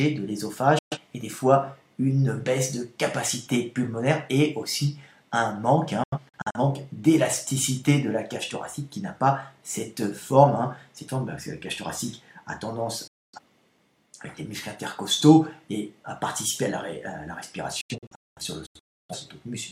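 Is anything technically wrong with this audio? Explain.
Yes. There are digital broadcast dropouts at 0.79 to 0.98 s, 6.03 to 6.59 s, 13.07 to 13.39 s and 17.81 to 19.14 s. The receiver muted whenever frames arrived corrupt or missing, so the sound snaps to silence within about 3 ms. The second and fourth dropouts break into several short holes, and the longest gap is about 0.3 s.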